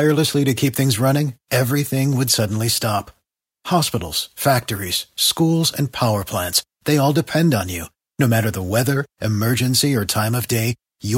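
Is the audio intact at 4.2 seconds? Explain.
Yes, the audio is intact at 4.2 seconds; no fault can be heard at that moment.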